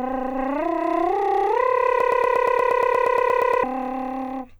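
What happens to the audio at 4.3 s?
Nothing goes wrong at 4.3 s: the music plays through that moment intact, with no fault to be heard.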